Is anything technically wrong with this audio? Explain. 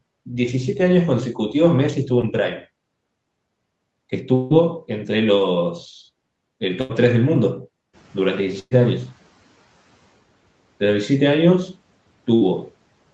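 Yes. There are several packet-loss faults and one noise-suppression fault.

At 2.21 to 2.25 s there is a short concealed packet loss. About 20 ms of audio reached the decoder too late. The receiver extrapolated the preceding sound for roughly 13 ms and blended back into real audio, which leaves a brief smear or wobble.

From 4.35 to 4.53 s the audio turns into a held, fading buzz or hiss for about 0.16 s. It then resumes further on, with around 160 ms of material gone. This is likely a long network dropout, where the receiver kept synthesising from the last good sound until real audio arrived again.

There are bursts of packet loss at 6.81 to 6.91 s, 8.59 to 8.73 s and 12.35 to 12.43 s. These are consecutive lost packets of about 80 ms, 120 ms and 60 ms. Concealment extends the last sound and turns it down, giving a held buzz or fading hiss before playback skips ahead. The middle burst ends in about 30 ms of silence.

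From 7.93 to 9.79 s the noise suppressor is catching up. Room noise jumps by about 15 dB around 8 s, and the suppressor's estimate lags behind it. The noise first breaks through with little reduction, then sinks by about 9 dB over roughly 1.9 s. Throughout, the sound is band-limited to 8 kHz, which points to an Opus call path at about 24 kbps.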